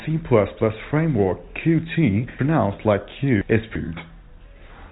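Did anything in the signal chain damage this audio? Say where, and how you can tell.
Yes: chunks out of order at the buffer stage. Between 2.39 and 3.76 s a 341 ms chunk plays three chunks late, so speech jumbles.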